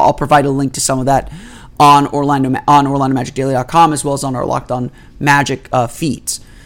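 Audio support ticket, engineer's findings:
Hard clipping, 0.00–0.38 s, ending just before "a link to", and 2.68–2.79 s. Peaks flat-topped, overdriven by about 6 dB and about 5 dB. Harsh crackle on loud speech. Stage gain exceeds converter or format headroom, adding high harmonics.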